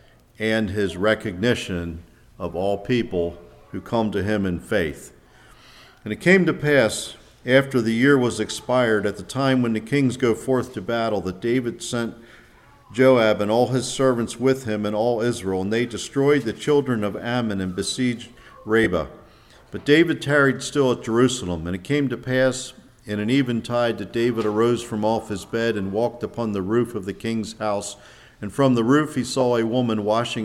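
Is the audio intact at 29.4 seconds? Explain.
No. At 29.40 s there is a very brief burst of lost LE Audio frames, a gap of about 7.5 ms that fits a single LC3 frame going missing over the Bluetooth link. The decoder concealed it by reusing the previous spectrum with randomised signs, so the sound is a tiny noisy smear rather than a hole. That distinguishes it from a plain dropout, which would leave a moment of silence, and from a click, which is a sharp transient.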